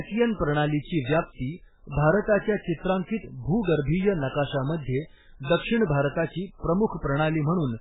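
MP3 compression, throughout the clip: the speech has nothing above 3.8 kHz and carries heavy swirling, watery artefacts, with s sounds turned to metallic chirps and onsets smeared. This is likely an MP3 encoder starved of bits. The damage points to a very low bitrate, around 8 kbps. The encoder cut the treble at a fixed frequency and dropped weaker frequency lines, and those lines flicker on and off from frame to frame.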